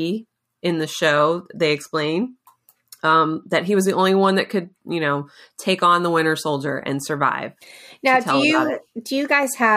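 Nothing is technically wrong with this speech recording.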